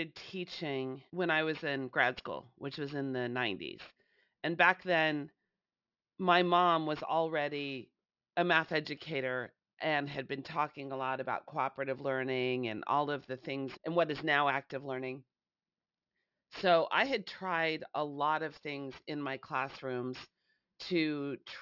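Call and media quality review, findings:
Aliasing, whole clip. The resampler lowered the rate without an anti-alias filter, and the fold near 6 kHz fits a 12 kHz output. Content above that folds back as unrelated pitches roughly 25 dB under the speech, making sibilants gritty and metallic, with energy running hard to the band edge.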